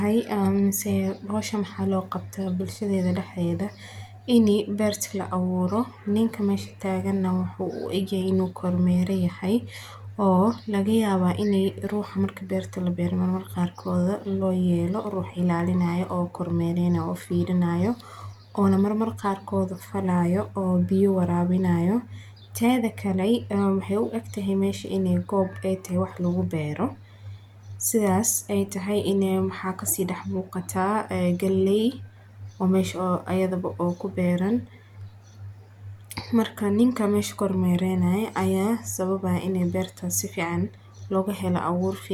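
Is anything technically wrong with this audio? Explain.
No, nothing technically wrong turns up anywhere in this speech recording.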